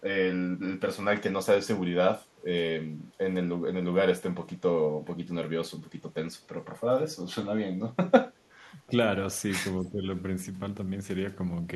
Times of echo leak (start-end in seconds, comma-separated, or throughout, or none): 9.82-9.87